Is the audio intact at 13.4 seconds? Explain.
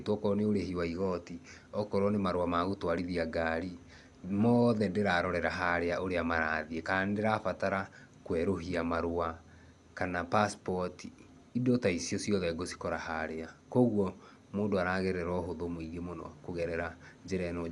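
No. At 13.4 seconds, as throughout, the speech has likely passed through Dolby Digital compression at a low bitrate, consistent with about 64 kbps. The encoder cuts the band above 11.4 kHz and starves lines that the decoder fills with dither noise, leaving the speech dull, with audible rough, fluttering noise.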